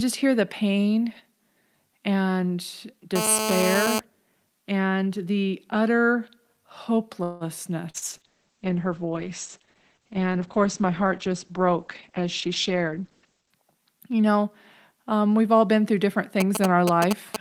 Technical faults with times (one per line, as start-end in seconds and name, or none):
3.16-4.00 GSM phone buzz
7.23-7.44 call audio freeze
7.90-8.04 short concealed packet loss
7.94-13.60 call bitrate drop
11.67-13.63 jitter buffer speed-up
16.40-17.41 GSM signalling bursts